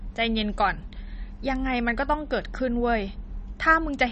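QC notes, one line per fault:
Throughout, MP3 compression: cut-off treble and a watery, swirly edge on the speech, likely a starved MP3 encode, fitting roughly 32 kbps.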